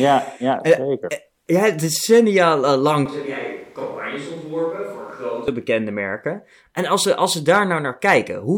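From 3.06 to 5.48 s, between "ja decennia eh" and "bekende merken", the speech abruptly turns roomy, hollow and thin, roughly 10 dB quieter, with more background noise; a switch to a distant microphone is likely. Unlike a plain gain dip, the tone and room change too, then snap back.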